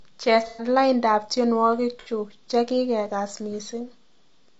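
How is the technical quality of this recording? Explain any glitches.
The recording's quality is compromised by codec damage throughout and two brief dropouts.

Low-delay AAC compression, likely AAC-ELD at a low bitrate near 32 kbps: short frames resolve pitch harmonics poorly, so the speech sounds rough and grainy with noise between harmonics.

AAC frame loss with concealment, from 0.47 to 0.68 s and 1.997 to 2.09 s: the decoder filled missing frames from earlier spectrum, leaving smeared, noisy, phasey patches.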